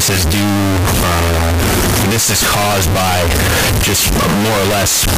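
Signed and unsigned mixed up, throughout: harsh distortion levelling soft and strong passages, likely from 16-bit samples read with the wrong sign, flipping the top bit.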